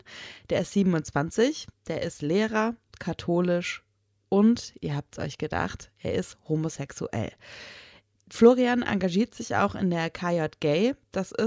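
No technical faults can be heard anywhere in this speech recording.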